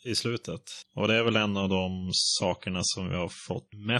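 Speech, and right after "det är", at about 1.24 s, it switches to an adaptive stream at a lower bitrate and stays there to the end. The quality change is sudden but there's no gap. Codec artefacts jump up and nothing above about 10.4 kHz survives, which sounds like an MP3 stream dropping from something like 128 kbit/s to roughly 32 kbit/s after the connection slowed.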